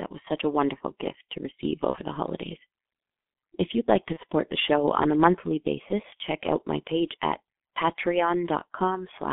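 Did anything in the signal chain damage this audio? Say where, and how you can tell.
Yes. At the codec stage, the G.723.1 codec leaves the speech muffled and hoarse with smeared consonants for the whole clip. The band runs only from about 200 Hz to 3.6 kHz, and the coarse, slowly updated voice model fits G.723.1 at 6.3 kbit/s.

At the network stage, VoIP packet loss concealed by the speech codec appears at 1.91–1.98 s and 4.13–4.19 s. Each gap suggests one lost 30 ms frame. The decoder stretched the previous pitch and filter into a brief fading buzzy tone or coloured noise, and the speech stays weak afterwards while its state recovers.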